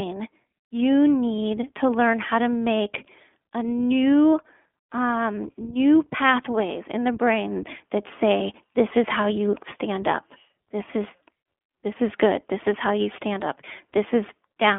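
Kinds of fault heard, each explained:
iLBC codec: narrowband speech with nothing above 3.6 kHz, and a rough, synthetic grain from separately coded 20 ms frames, unlike a clean band-limiting filter.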